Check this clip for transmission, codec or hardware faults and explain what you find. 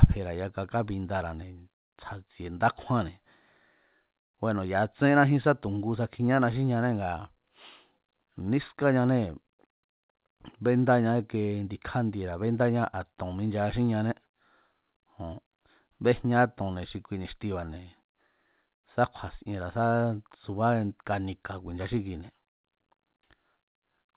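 No transmission, codec or hardware faults are audible here.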